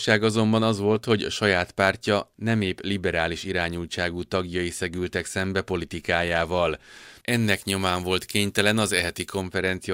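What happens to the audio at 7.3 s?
Pre-emphasis left on starts at 7.28 s, right after "tagjai szegültek szembe politikájával", and lasts until 9.42 s. The treble boost applied before transmission, here matching the 75 µs FM curve, was never undone by the complementary de-emphasis. Highs stand about 14 dB above the 1 kHz level by 10 kHz. The speech turns thin, bright and edgy, with exaggerated sibilance.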